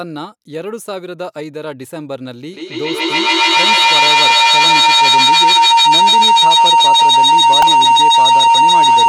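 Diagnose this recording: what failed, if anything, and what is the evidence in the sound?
Call processing failed to break an acoustic loop, causing a feedback howl from 2.53 s to the end. A tone around 1 kHz builds to about 14 dB above the speech, pulsing roughly every 150 ms. Mic-to-speaker gain exceeds unity, so each pass grows instead of fading.

At the driver or buffer stage, there's a repeated buffer at 7.62 s: a tiny click-buzz where a 1.33 ms slice, which fits a 64-sample buffer, plays back-to-back several times with hard joins. Fresh audio arrived late, so the device looped the old block, losing around 5 ms.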